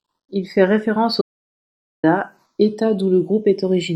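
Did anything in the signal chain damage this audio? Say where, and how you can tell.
Yes. Throughout the speech the channels drift apart at the converter stage. The two sides run on separate clocks, off by something like 150 ppm. The inter-channel delay grows to under half a millisecond by the end. Summed to mono, the sweeping comb notches sound like slow flanging.

There is an audio dropout to silence from 1.21 s to 2.03 s, right after "fait référence au". About 820 ms of speech is simply gone. The gap is silent with no room tone. The likely cause is a lost input or broken link while the recorder kept writing.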